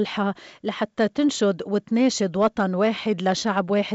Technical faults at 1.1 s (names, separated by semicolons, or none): none